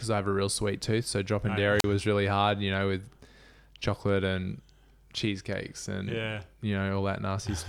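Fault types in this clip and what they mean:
Wireless microphone squelch dropout: the transmitter's radio signal faded and the receiver's squelch muted its output, leaving a brief hiss then a 38 ms silent hole just before "was really hard you".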